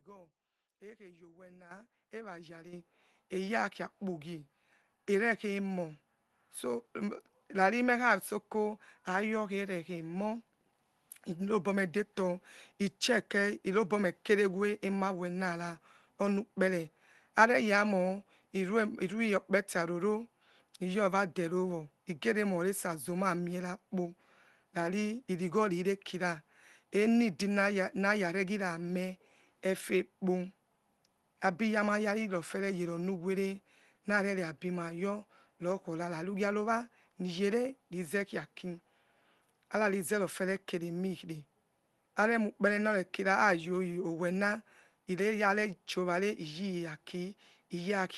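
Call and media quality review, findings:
Microphone volume stepped up at 1.71 s, about 10 dB, and again at 2.73 s, about 8 dB: speech and background noise floor jump together, instantly. Probable component: call client's automatic gain control raising device input volume in single steps after judging the mic too quiet. Smaller step at 10.74 s, about 1 dB. Steps sit on top of the Opus call path, whose band limit near 12 kHz fits a 24 kbps setting.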